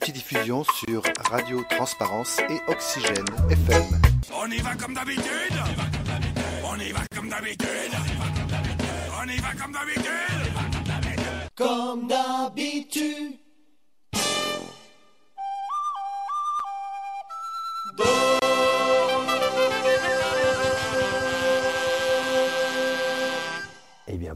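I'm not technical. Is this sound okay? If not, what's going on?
No. There is a gap at a join of encoded pieces at 0.85 s, 7.07 s and 18.39 s, lasting about 26, 46 and 27 milliseconds. The audio was compressed in separate chunks and glued together untrimmed, so each chunk's built-in padding leaves a brief silence before the sound carries on.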